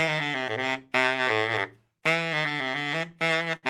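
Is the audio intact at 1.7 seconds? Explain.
Yes, the audio is intact at 1.7 seconds, with no dropout, glitch or distortion to be heard at that point.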